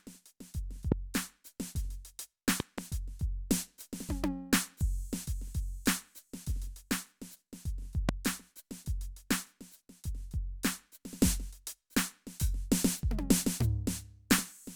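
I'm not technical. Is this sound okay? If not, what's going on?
No. There are three loud pops, sudden sharp bangs much louder than the music. They come at 0.92 to 0.94 s, at 8.09 to 8.11 s, and as a quick double pop from 2.60 to 2.81 s. The music carries on underneath. A likely cause is an electrical jolt from a plug, switch or static.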